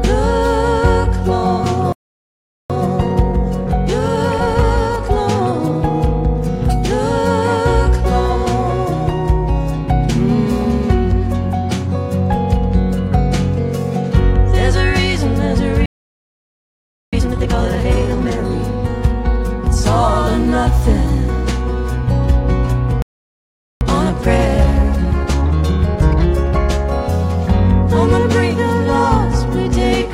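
At 1.92 s the sound cuts to silence for 0.77 s, at 15.86 s for 1.27 s, and at 23.02 s for 0.79 s. These are playback stalls, likely the player running out of data or its thread being blocked. Each stall is followed by time-compressed catch-up, where the audio rushes at its normal pitch as small pieces are cut and cross-faded to clear the backlog. This runs at 1.15 times speed from 2.70 to 5.70 s, at double speed from 17.13 to 18.39 s, and at 1.15 times speed from 23.81 to 26.81 s.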